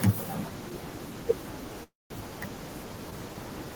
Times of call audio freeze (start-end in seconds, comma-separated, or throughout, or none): 1.83-2.13